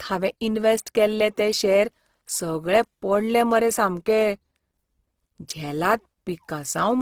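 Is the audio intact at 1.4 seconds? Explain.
No. At 1.4 seconds, as across the whole clip, the speech sounds rough and grainy, which points to likely Opus compression in its music mode at a low rate near 16 kbps. Starved bands are filled with folded or noise content, so instead of MP3's swirling holes you hear texture.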